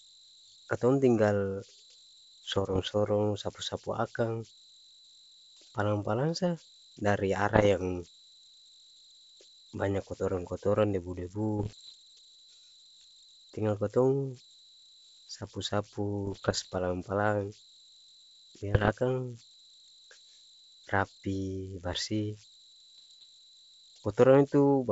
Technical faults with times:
0.00-24.92 converter idle tones
2.48-2.92 bit errors on an ADPCM link
7.55-7.67 bit errors on an ADPCM link
11.58-11.94 bit errors on an ADPCM link
16.25-16.81 bit errors on an ADPCM link
18.74-18.93 bit errors on an ADPCM link
22.94-23.26 bit errors on an ADPCM link

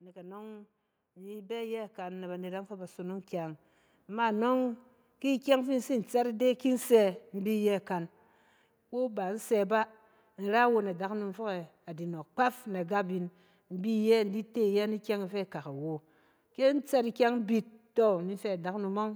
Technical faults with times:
0.12-4.44 automatic gain rising

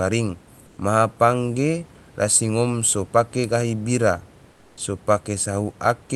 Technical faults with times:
0.67-0.77 comfort noise in place of the background
4.51-4.77 comfort noise in place of the background

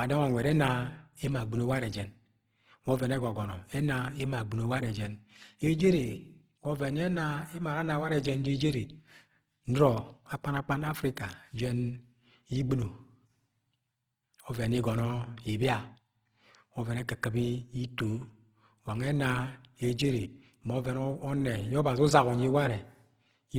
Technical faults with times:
0.00-23.58 Opus compression

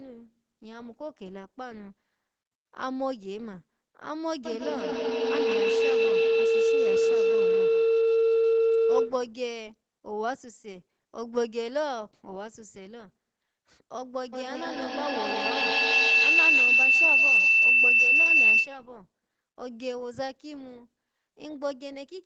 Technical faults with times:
4.45-9.36 feedback howl
14.33-18.95 feedback howl

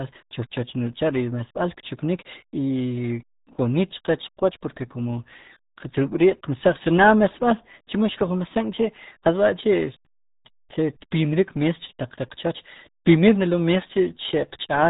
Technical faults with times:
0.00-14.90 RealAudio 14.4 codec

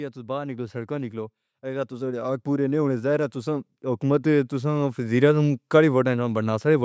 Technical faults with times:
0.14-5.07 automatic gain rising

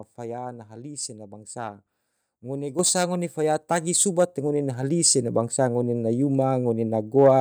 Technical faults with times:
2.79 microphone volume stepped up

